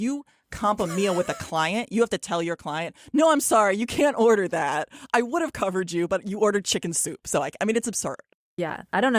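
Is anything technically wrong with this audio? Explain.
No, nothing technically wrong turns up anywhere in this speech recording, so there's nothing here to flag.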